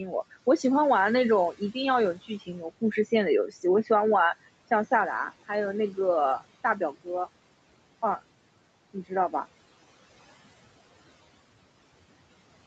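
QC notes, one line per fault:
2.46–2.83 s: speech cut by the noise suppressor. The suppressor mistook speech for noise, dropping it about 15 dB. Roughly 150 ms sounds swallowed and faint.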